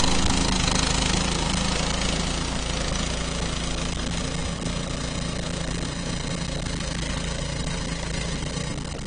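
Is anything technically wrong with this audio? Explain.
Yes. AAC compression runs throughout. Nothing survives above 9.8 kHz, leaving the sound dull and smeared. The damage is plainly audible, likely from AAC-LC at a low bitrate around 32 kbps.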